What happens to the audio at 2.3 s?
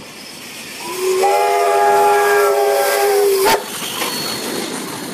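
Nothing goes wrong at 2.3 s; the audio runs on intact through that moment with no dropout, click or distortion.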